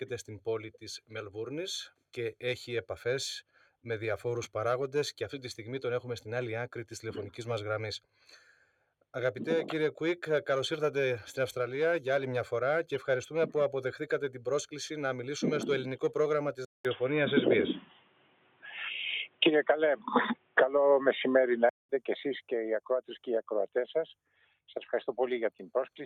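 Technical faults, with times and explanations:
3.49–3.72 s, 8.46–8.83 s, 17.86–18.64 s, 20.36–20.57 s, 24.34–24.54 s: sound cut by the noise suppressor. The suppressor mistakes sustained sound for noise and pulls it down by up to about 12 dB, so the sound sinks or its decay ends early.
16.65–21.89 s: input switched to a poorer device. A 200 ms gap is followed by dull, narrowed sound, a level shift of about 5 dB, and new background noise roughly 30 dB below the signal. This is likely a switch to a narrower-band microphone or a headset call profile.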